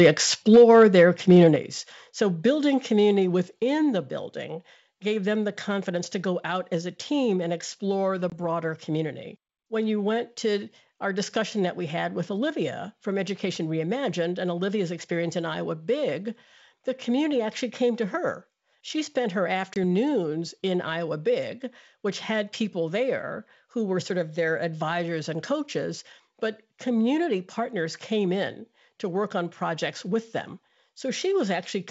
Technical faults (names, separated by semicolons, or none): microphone overload; microphone volume stepped down; packet loss on an ADPCM call